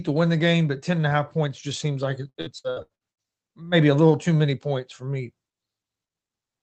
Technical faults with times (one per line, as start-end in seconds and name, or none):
2.29-3.27 repeated packet loss (robotic sound)